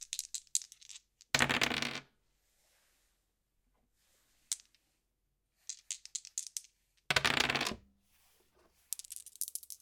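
From 7.65 s to the end at 9.81 s, the sound abruptly plays at the wrong speed, running 1.47 times faster and lifting the pitch about seven semitones, so everything turns high and hurried at once. The likely cause is that this section was played back or edited against the wrong clock. On a spectrogram, every feature jumps upward by that ratio and events are squeezed closer together. On the waveform, cycles and onsets tighten noticeably.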